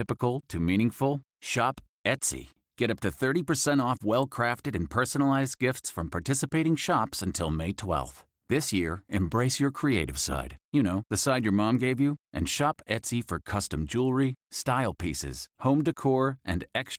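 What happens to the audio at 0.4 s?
Nothing goes wrong at 0.4 s: the speech there comes through intact, carried by light Opus voice compression at full bandwidth with no dropout, glitch or added distortion at that moment.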